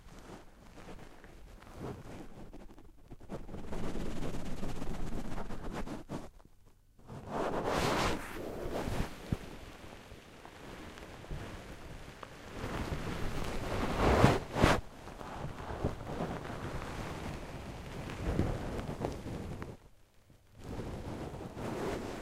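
From 12.19 s to 13.98 s a train of clicks runs over the audio: about ten sharp ticks of much the same shape, arriving at around 5.6 per second but with uneven spacing rather than a steady beat. Each peaks at roughly the level of the underlying sound. An external source injecting repeated pulses is the likely cause, such as interference from nearby equipment or a faulty connection or power supply.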